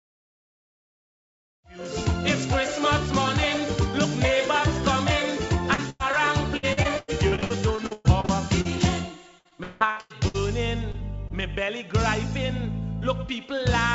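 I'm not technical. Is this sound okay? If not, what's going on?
No, there are a few dropouts from a bad connection. Around 5.74 to 5.80 s, 6.12 to 6.15 s, 10.92 to 11.03 s and 11.28 to 11.32 s you'll hear short concealed packet loss. Tiny chunks, a few hundredths of a second each, never arrived, and the receiver papered over them by stretching the sound just before. Each one comes across as a quick smear or wobble.

From 5.90 to 6.02 s there's a burst of packet loss. About a tenth of a second went missing in one go, so the last bit of sound gets held as a fading buzz or hiss, and then the audio jumps ahead with that piece gone.

The worst stretches are 6.57 to 8.67 s and 9.39 to 10.36 s, where repeated packet loss gives a robotic sound. Gaps keep landing one after another, fourteen in the first stretch and six in the second, with the longest around a sixth of a second. The constant patching makes it choppy. 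In that second stretch roughly half the time is filled-in guesswork rather than real audio.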